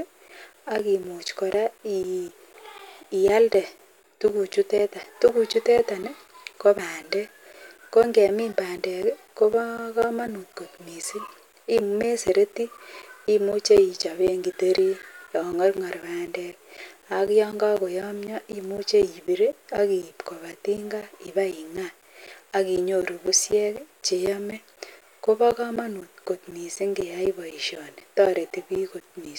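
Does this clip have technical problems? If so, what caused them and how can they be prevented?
Yes. Periodic USB or driver dropouts occur from 0.28 s to 29.26 s, repeating every 0.25 s. Each time, a background task stalls the bus or driver, and around 10 ms of speech drops to silence, heard as regular ticks. Prevent it by disabling that task or enlarging the audio buffer.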